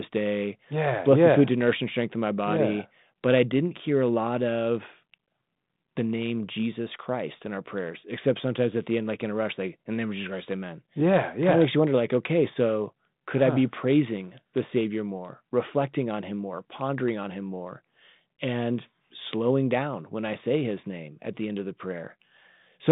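Nothing goes wrong anywhere in this speech clip; it simply carries the narrow telephone band of about 150 Hz to 3.7 kHz that comes with 32 kbit/s phone-line coding, along with a light touch of that coding's own texture.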